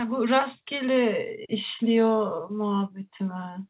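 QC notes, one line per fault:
No faults heard in this speech clip.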